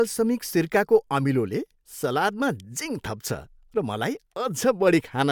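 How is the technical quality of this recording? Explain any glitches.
The speech recording holds steady throughout, with no glitches or technical faults to be heard anywhere in it.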